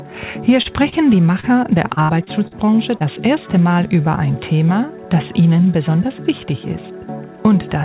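At 0.62, 0.89 and 1.4 s, short concealed packet loss replaces about 30 ms each time with extrapolated sound, heard as a brief smear. On a spectrogram, each shows as a smoothed, repeated-looking patch.

From 1.88 to 3.03 s, repeated packet loss (robotic sound) leaves seven gaps, the longest 64 ms, totaling about a fifth of the stretch. The patches make the sound choppy, and the waveform shows recurring copied segments. Throughout, the spectrum stops at 4 kHz, which fits a narrowband G.711 call path.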